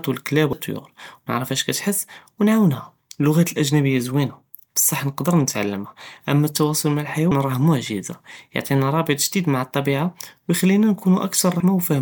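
Compressed frames are skipped three times. At 0.53 s, just after "ו אלכלאב", about 0.3 s of speech vanishes. At 7.31 s, after "נתעלמה אמה אלתואסול מע", roughly 0.15 s is lost, and at 11.60 s about 0.1 s. The gaps fit whole 32 ms frames that were never decoded. At each join the speech jumps straight ahead. The waveform shows an abrupt change in shape with no silence, and the spectrogram shows a sudden discontinuity in the formant tracks.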